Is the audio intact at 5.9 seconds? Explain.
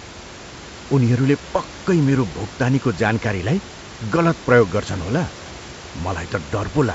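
Yes, the audio is intact at 5.9 seconds, with only the room's background noise, about 17 dB below the speech, and the G.722 wideband telephone coding heard as it normally sounds.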